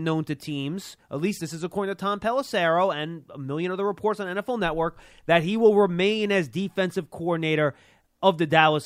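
No technical faults can be heard anywhere in this speech recording; the signal comes through intact, with nothing breaking into it.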